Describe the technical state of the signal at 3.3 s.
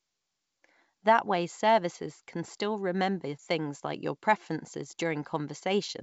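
At 3.3 s the signal is intact, carried over G.722 wideband telephone coding at 64 kbit/s, with the speech band-limited to below about 7.7 kHz.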